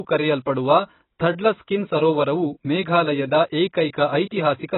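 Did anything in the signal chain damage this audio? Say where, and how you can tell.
Yes. The codec stage is the likely culprit: heavy AAC compression runs throughout, pointing to AAC-LC at a very low bitrate, around 16 kbps. Nothing survives above 4 kHz, dulling the speech's sibilants, and coarse spectral quantisation leaves a smeared, warbling texture.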